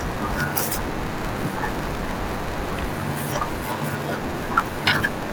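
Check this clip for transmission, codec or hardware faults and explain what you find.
One fault runs through the whole speech clip: a block size mismatch (padded). One stage hands over blocks shorter than the next stage reads, so each block ends in a stretch of zeros. That is consistent with a 512-sample read. The gaps repeat at 93.8 Hz, producing a steady buzz, and the speech runs slow at 0.861 times normal speed with roughly unchanged pitch. A waveform shows regular flat dropouts; a spectrogram shows vertical stripes and harmonics at 93.8 Hz multiples.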